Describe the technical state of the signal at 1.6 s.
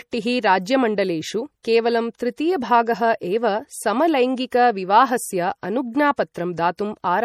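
Pre-echo at 1.63 s: the block-wide quantisation noise leaks into the quiet moment before a sharp attack, adding a roughly 19 ms hiss and softening the onset. The surrounding audio is plainly watery and swirly with smeared attacks, likely from MP3 compression at a low rate, which fits about 48 kbps.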